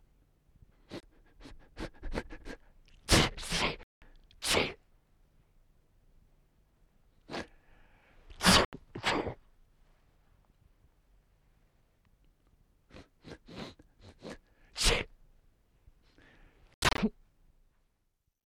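Sharp-edged silences cut the sound at 1.00 s (27 ms), 3.83 to 4.02 s, 8.65 to 8.73 s, and as scattered gaps from 16.74 to 16.98 s, likely a Bluetooth dropout of lost packets. Unlike a buffer stall, the sound resumes further on, as if it kept playing.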